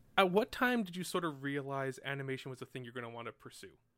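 From 0.43 s to 1.30 s, a fast ticking rides on the speech as its level drops by about 10 dB, a rough zipping texture that stops once the level settles. This is zipper noise. The gain change is applied in 1 dB steps, roughly fifteen a second, with no smoothing between them. Each abrupt jump puts a small discontinuity into the waveform, so every step clicks audibly.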